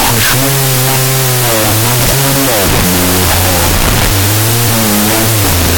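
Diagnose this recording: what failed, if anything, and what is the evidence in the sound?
Wrong sample width throughout: 16-bit speech read as unsigned 8-bit at the sample-format conversion stage, so each sample splits into two, giving half speed, an octave drop, and loud noise.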